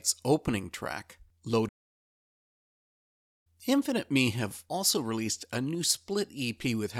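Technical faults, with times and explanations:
1.68–3.47 s, playback stall: right after "opening track" the speech stops dead mid-flow and the output stays silent for about 1.77 s before resuming. The likely cause is the player running short of buffered data, or its output thread being blocked, so nothing reached the output until it recovered. On a waveform this shows as a flat, silent gap; on a spectrogram, a clean vertical band of blank energy across all frequencies between the surrounding speech.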